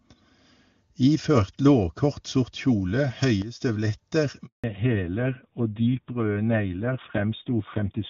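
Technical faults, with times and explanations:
3.42 to 3.60 s, sudden gain jump: The level drops by about 10 dB in a single step and recovers at 3.60 s. Speech and background noise fall together, with no fade. This likely comes from a digital gain setting applied instantly, without a ramp.
4.46 to 4.64 s, handover gap: The speech fades out within a few tens of milliseconds, then there is 180 ms of silence. The call was switching networks, and no speech frames arrived during the change. Whatever was said in that moment is lost.
4.64 s to the end, fallback to narrowband: After the gap the call no longer uses HD Voice at 23.85 kbit/s, which had sounded clear. It continues on the older narrowband codec at 7.4 kbit/s. Nothing above 4 kHz remains, so speech sounds duller, muffled and rougher.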